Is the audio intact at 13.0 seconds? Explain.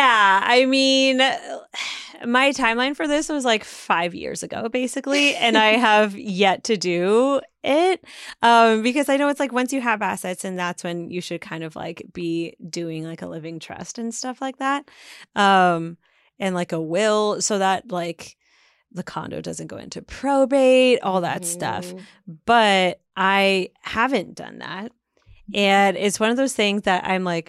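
Yes, at 13.0 seconds the audio is intact, with no dropout, click, distortion or other fault audible at that point.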